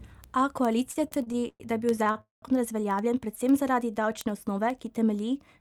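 Speech, and it's got a few problems stacked up. From 0.16 s right to the end there are word clock ticks: sharp, uneven clicks roughly every 70 ms, which fits a receiver running off its own clock a few hundred ppm away from the sender's and slipping a single sample each time the two drift past each other. Between 0.91 and 2.18 s it stutters with repeated stalls, about ten short hold-ups where the last sound is stretched to cover the wait. That adds up to around 333 ms of filler, the longest stretch 116 ms, so roughly a quarter of that span is drag rather than fresh audio. At 2.21 to 2.45 s there's a call audio freeze: the sound hangs and fades into about 140 ms of silence before carrying on where it left off. It's likely packets got held up and the jitter buffer ran dry, with about 214 ms of filled gap. Then from 3.34 to 4.17 s a jitter buffer slow-down repeats little pitch periods to rebuild its reserve, adding about 80 ms so the audio plays at roughly 91% speed with the pitch unchanged.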